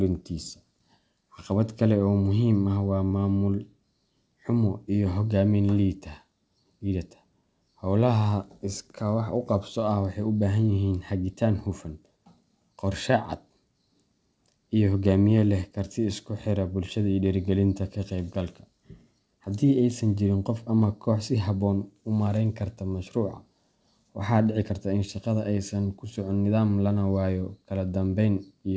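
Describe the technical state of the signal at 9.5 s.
At 9.5 s the speech is intact, with no fault, and the call path leaves its usual band limit, with nothing above about 8 kHz as a wideband codec such as G.722 would leave.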